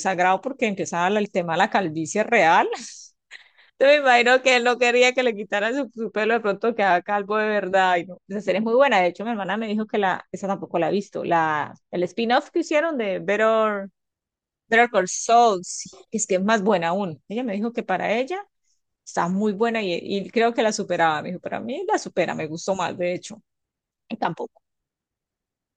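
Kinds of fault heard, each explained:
De-emphasis applied wrongly: from 5.85 to 13.85 s the speech turns dull and muffled, as a treble cut meant to undo pre-emphasis acts on audio that has none, or acts a second time, sloping smoothly to about 14 dB down at 10 kHz, unlike a low-pass filter's abrupt cut-off.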